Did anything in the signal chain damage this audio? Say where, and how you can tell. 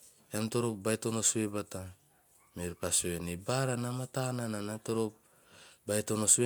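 No, nothing in the signal chain left audible damage on this speech recording. Listening through the whole recording, no stage from capture to playback leaves any trace that points to a problem.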